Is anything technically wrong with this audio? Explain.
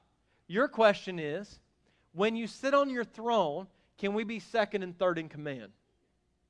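No, nothing technically wrong stood out on listening to this recording.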